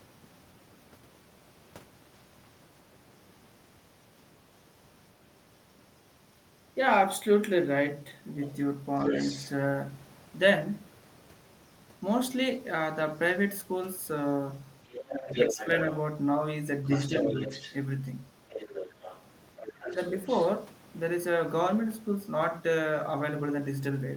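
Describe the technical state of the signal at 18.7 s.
At 18.7 s the signal carries the other side's voice leaking through, from 18.49 to 20.48 s. A second voice sits under the talker at roughly 10 dB lower, most likely loudspeaker echo that the echo canceller failed to remove from the microphone pickup. On a spectrogram it shows as a fainter, separate set of harmonic traces overlapping the main speech.

Just before that moment, from 18.64 to 18.68 s, there is speech suppressed in double talk. With both sides talking at once, the canceller likely could not separate its own talker from the echo and turned the whole signal down. The result is a brief dip of about 5 dB lasting some 40 ms. In the waveform it appears as a short notch in the envelope, and on a spectrogram as a thin vertical band of reduced energy.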